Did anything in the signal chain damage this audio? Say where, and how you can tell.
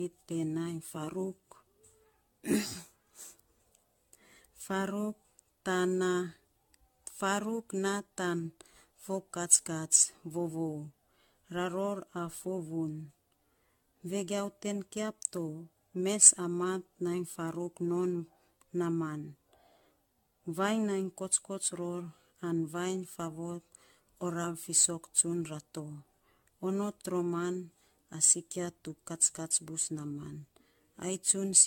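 Yes, at the codec stage, and it runs through the whole clip. The speech has that swirly, hollow smear and blurred consonant attacks you'd expect from generation loss, worse than a single encode around 96 kbit/s AAC-LC would give, with nothing above 17 kHz. The likely cause is the audio being decoded and re-encoded something like ten times. Each pass lands on a shifted frame grid and requantises, so the noise and spectral holes keep stacking.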